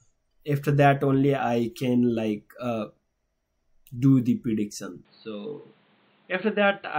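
At 5.05 s the sound turns boxy and quieter, likely an input switched to a poorer device. The spectrogram goes blank above 4.5 kHz, and the waveform shrinks slightly.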